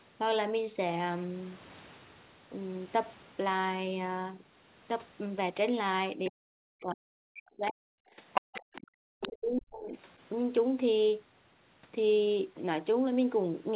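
From 6.29 to 7.81 s the speech sinks by as much as about 40 dB for roughly a second and a half. This is speech suppressed in double talk. The likely cause is an echo canceller that could not separate the talker from loudspeaker echo and attenuated both. A shallower dip of about 5 dB follows at 8.16 to 8.21 s. A deeper one of about 40 dB runs from 8.96 to 9.95 s.

The other side's voice is leaking through in three places. At 7.67 to 7.72 s there is a brief scrap about 20 dB below the speech. From 8.33 to 8.87 s it comes through as loud as the speech, and at 9.22 to 9.28 s it appears about 10 dB down. This is likely echo left over from the loudspeaker that the canceller failed to remove.

From 8.49 to 8.68 s the room background is gated by the echo canceller. The canceller clamped the microphone hard while the loudspeaker played, so the ambience drops by about 40 dB for a moment and then returns.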